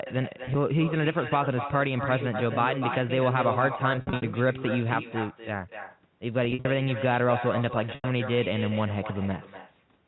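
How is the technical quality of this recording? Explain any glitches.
The recording is marred by a constant acoustic echo and four short dropouts from packet loss.

Echo with no canceller runs through the whole clip. The far end's loudspeaker feeds back into its microphone, and nothing subtracts it, so every phrase returns about a third of a second later, roughly 9 dB quieter, sounding thinner. On a waveform each burst of speech has a smaller trailing copy. On a spectrogram the harmonic patterns repeat faintly, shifted to the right.

Packet loss with pitch repetition occurs at 0.43–0.55 s, 3.96–4.22 s, 6.45–6.65 s and 7.95–8.04 s. Missing audio (60, 180, 120 and 90 ms) was filled by repeating the last pitch cycle and fading it over about 50 ms. The brief gaps at 0.43 s sound like a buzzy, held tone. The longer runs, up to 60 ms at 3.96 s, fade toward silence before speech cross-fades back. 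A spectrogram shows flat, frozen harmonic stripes that dim into gaps.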